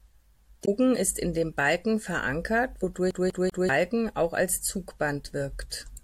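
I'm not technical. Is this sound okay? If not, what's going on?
No, it has two faults. From 0.62 to 0.68 s there is damaged data in a compressed stream. Part of the stored speech is corrupted, so the playback software misreads that stretch and briefly loses its place, giving a short chirp or blip before it finds the next clean section.

From 3.11 to 3.69 s the sound behaves like a CD stuck on one turn. A slice of speech about 0.2 s long plays three times in a row, with a tiny gap at each jump, producing the quick, even stutter of a skipping disc.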